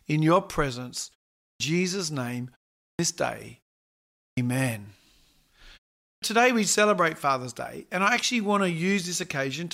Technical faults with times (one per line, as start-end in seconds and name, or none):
1.40-1.60 clipped start after a pause
2.79-2.99 clipped start after a pause
4.18-4.37 clipped start after a pause
6.03-6.22 clipped start after a pause